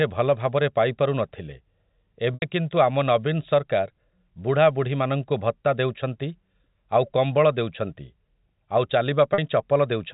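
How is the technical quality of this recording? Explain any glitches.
Two short glitches from packet loss with pitch repetition stand out, heard through telephone-band sound limited to 4 kHz, consistent with G.711 telephone coding.

At 2.34 s, just before "କିନ୍ତୁ ଆମ", 80 ms of speech goes missing, and at 9.34 s another 40 ms, both consistent with 20 ms packets. The receiver fills each gap by looping the last pitch period. The 40 ms gap sounds like a briefly held, buzzy note. The 80 ms gap outlasts the roughly 50 ms fade, so it sinks toward silence before speech cross-fades back in. A plain dropout would leave a hole or click instead of this sustained tone.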